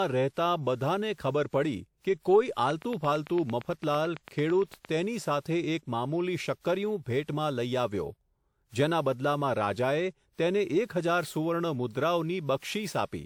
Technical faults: generation loss; train of clicks

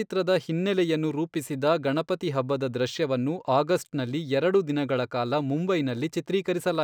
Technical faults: imaging from linear upsampling

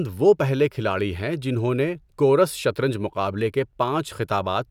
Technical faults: none

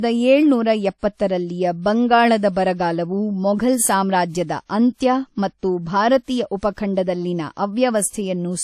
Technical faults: transcoding between lossy codecs

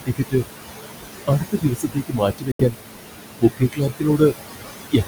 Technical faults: noise suppressor artifacts; speech cut by the noise suppressor; Bluetooth dropout

